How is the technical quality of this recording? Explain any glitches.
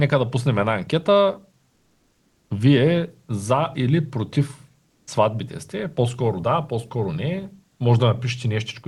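The recording has two stretches where the real background gives way to synthetic noise, and one speech onset that begins too abruptly. It passed through a call path with audio up to about 12 kHz.

Comfort noise in place of the background appears from 1.72 to 2.50 s (780 ms, about 3 dB quieter) and from 4.88 to 5.07 s (190 ms, about 11 dB quieter). This is likely discontinuous transmission: the sender stopped sending during pauses, and the receiver substituted smooth, detail-free hiss. A noise gate would leave near-silence instead.

An onset clipped by the voice detector occurs at 5.02 s. The sender's detector likely reacted late, so 50 ms of the attack went unsent, and the speech jumps in hard straight out of the comfort noise. A dropout would instead punch a hole mid-sound.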